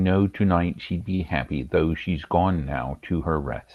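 Just after "tonight she'd be", from 1.15 to 1.23 s, the speech briefly hangs, holding one sound about 43 ms too long with a faint buzzy sameness. That is a short stall from a late packet: the jitter buffer ran dry, so the receiver stretched the last audio until the packet arrived, then resumed without losing anything, leaving playback 43 ms later.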